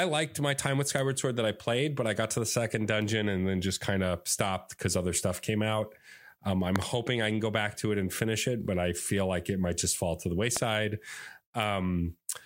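Loud pops at 6.76 to 6.84 s (two, about 20 dB above the speech) and 10.57 to 10.59 s, likely voltage transients from a plug, switch or static, sit on top while speech continues unbroken.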